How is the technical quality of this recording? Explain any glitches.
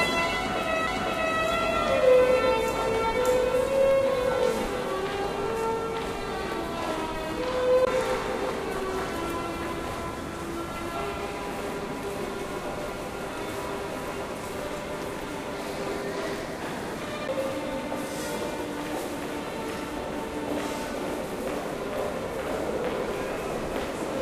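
Three CD skips interrupt the playback, at 0.87 s, from 7.85 to 7.87 s, and at 17.28 s. Each is heard as a tiny tick followed by a sudden jump in the sound. The laser was knocked or hit a flaw and landed on another turn of the disc's spiral. The player muted very briefly, only a few milliseconds at the first and around 20 ms at the second, then resumed from a different point.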